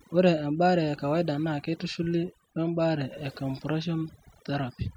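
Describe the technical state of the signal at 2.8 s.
At 2.8 s the speech carries overdone noise removal, which runs through the whole clip. A noise reducer set far too aggressively is pulling individual frequency bands down whenever they sit close to its noise estimate, taking the quieter parts of the voice with them. The background drops and breaks up into twinkling specks. Unlike a noise gate, which mutes everything at once, this cuts band by band.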